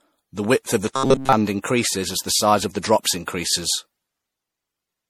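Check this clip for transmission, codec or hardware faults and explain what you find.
Two faults are audible: one runs through the whole clip and one is a brief burst near the start.

Generation loss affects the entire clip. The speech sounds swirly, hollow and smeared, with blurred attacks. The likely cause is MP3 at 64 kbit/s being re-encoded around seven times, with each pass quantising on a fresh frame grid so the damage accumulates. A single 64 kbit/s encode would not sound this hollow.

Robotic sound from repeated short buffers appears from 0.94 to 1.33 s, between "width of the" and "increases as the size". A rigid metallic buzz at 134 Hz follows the original speech only roughly. This likely comes from a buffer of about 7.5 ms being replayed over and over while most of the real audio is skipped. Unlike the diffuse smearing of generation loss, this fault is brief, tonal and locked to one pitch.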